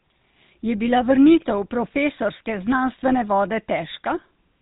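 From start to finish the speech carries the sound of the GSM full-rate codec, the original mobile phone coder. It rebuilds the voice from a vocal-tract model driven by sparse, evenly spaced pulses. Much of the fine detail between those pulses is thrown away. The result is a buzzy, gravelly roughness that is plainly audible here. Nothing survives above about 3.8 kHz, so sibilants lose their bite. The damage fits a bitrate of about 13 kbps.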